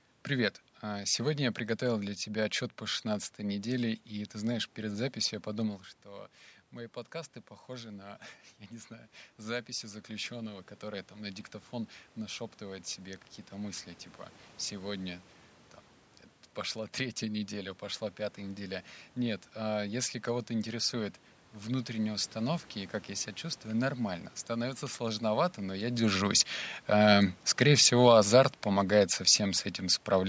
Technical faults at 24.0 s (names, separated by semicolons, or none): none